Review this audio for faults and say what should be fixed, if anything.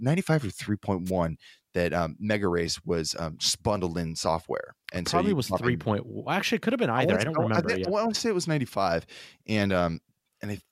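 A wireless microphone noise hit occurs from 1.06 to 1.11 s, a burst of static about 50 ms long. The analogue FM radio link fades as reflected signals cancel at the receiver, so receiver noise rises. Unlike a digital dropout, which leaves silence or a hard gap, this fills the gap with hiss. Use diversity receivers and keep clear line of sight between transmitter and antennas.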